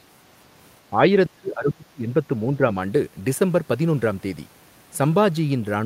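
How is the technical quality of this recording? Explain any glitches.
The recording has two level dips in the speech. From 1.34 to 2.09 s the speech falls by about 35 dB, and from 2.57 to 2.67 s it dips slightly. This is likely speech suppressed in double talk: an echo canceller cut the talker while the far side spoke. A packet dropout would instead cut off abruptly.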